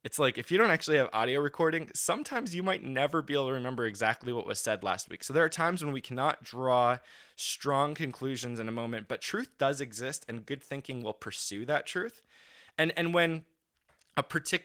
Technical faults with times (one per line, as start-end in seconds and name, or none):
none